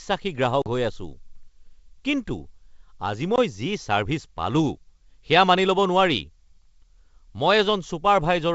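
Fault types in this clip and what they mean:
Packet loss on an ADPCM call: a couple of packets near 0.62 s and a single one near 3.36 s never arrived. About 40 ms and 20 ms of silence filled the gaps, and the decoder's predictor and step size drifted from the sender's. Each loss is a hard-edged hole in the speech. The sound then returns with slight distortion, and settles within tens of milliseconds, against clear wideband G.722 audio.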